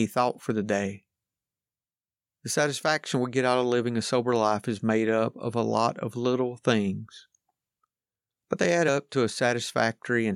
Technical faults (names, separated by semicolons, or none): compressed frames skipped